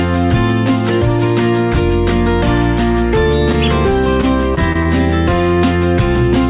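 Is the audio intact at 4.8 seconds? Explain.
No. From 4.21 to 4.87 s the stream suffers repeated packet loss (robotic sound): four separate holes, the longest about 21 ms, totalling around 60 ms of missing audio. The receiver bridged each hole by extending the preceding sound, with about 75 ms of patched material covering roughly a tenth of that stretch. At 4.8 s the audio is choppy, with small pieces dropped out.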